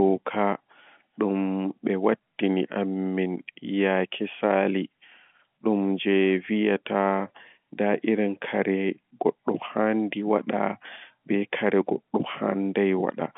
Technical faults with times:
none

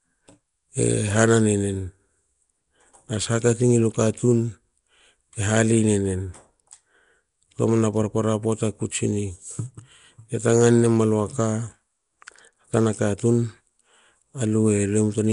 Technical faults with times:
0.00-15.32 Nellymoser compression

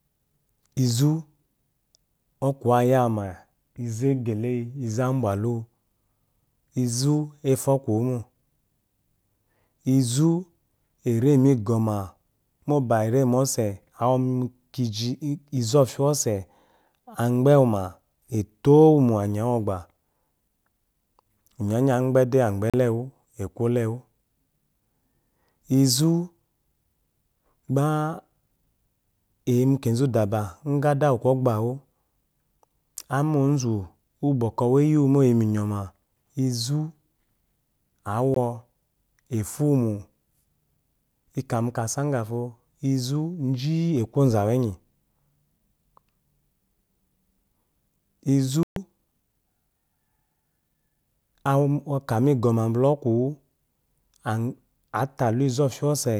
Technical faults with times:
22.70-22.74 Bluetooth dropout
38.34 Bluetooth dropout
48.63-48.76 Bluetooth dropout

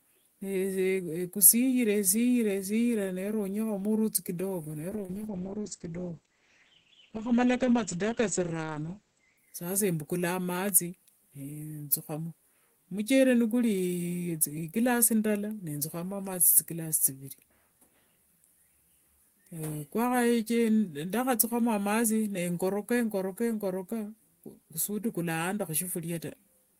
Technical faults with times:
4.90-9.45 call bitrate drop

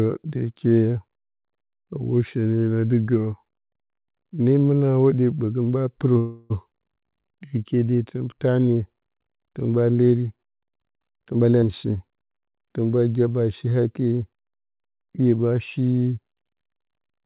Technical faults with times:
6.18-6.52 call audio freeze
6.70-6.73 skip ahead
7.03-8.47 jitter buffer slow-down
11.20-11.52 jitter buffer speed-up
11.61-11.64 skip ahead
11.70-12.11 jitter buffer slow-down

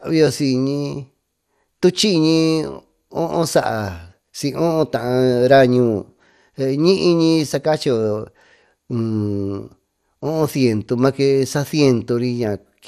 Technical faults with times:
0.00-12.87 MP2 compression

